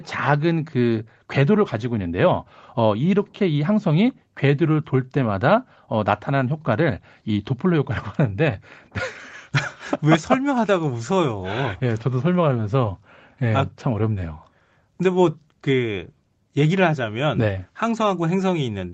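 No technical faults can be heard in this recording.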